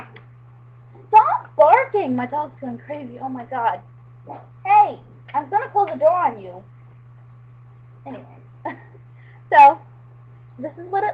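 Nothing is technically wrong here: the audio comes through an Opus call path working as intended, with no faults to point to at any time.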